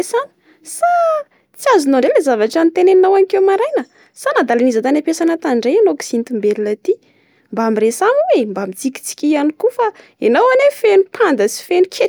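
A speech recording, and nothing technical stands out anywhere in it, so there's really nothing to flag.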